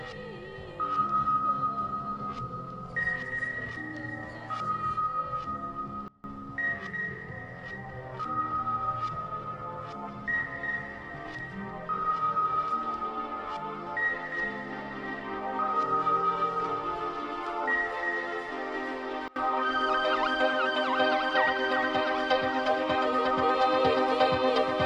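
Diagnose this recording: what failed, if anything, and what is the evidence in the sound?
At 6.08 to 6.24 s and again at 19.28 to 19.36 s, the sound and its background noise drop together by about 24 dB in an instant. This sudden gain jump is likely a digital gain setting applied in the driver or buffer stage without a ramp.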